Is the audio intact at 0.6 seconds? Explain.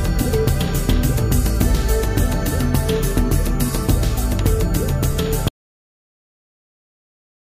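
Yes, at 0.6 seconds the audio is intact, with no dropout, click, distortion or other fault at that point.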